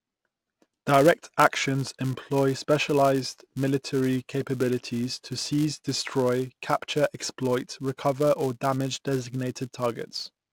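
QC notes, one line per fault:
Throughout, filter restarted on every block: the filter drops its stored state at each block boundary and starts again from silence, so every block opens with a small transient. At roughly 5 ms blocks, these form a steady 200 Hz buzz that rises and falls with the speech level.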